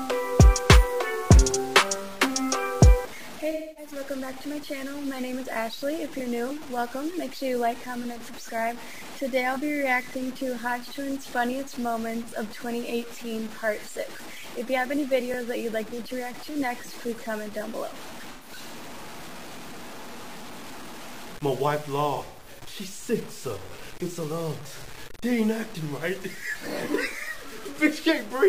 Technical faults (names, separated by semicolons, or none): low bit depth without dither; AAC frame loss with concealment